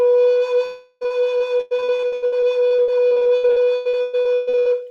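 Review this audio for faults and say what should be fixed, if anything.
From 0.65 to 1.03 s the music stops arriving for about 0.36 s, most likely a long network dropout. The receiver fills the hole by stretching the last sound into a decaying buzz instead of going silent, and the lost passage never returns. On a spectrogram the musical detail freezes into smeared horizontal bands that fade; the waveform shows a smooth, shrinking envelope. Prevention: a larger jitter buffer with redundancy or retransmission would ride out such an outage.

From 1.03 to 4.68 s the music is chopped by repeated packet loss, giving choppy sound with pieces missing. 33 gaps, the longest 120 ms, are each patched by repeating the preceding sound, so about 39% of this stretch is concealment rather than real audio. A spectrogram shows a comb of short, blurred, repeated slices interrupting the harmonics; the waveform shows recurring copied segments. 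Prevention: forward error correction and a steadier network path would cut the losses.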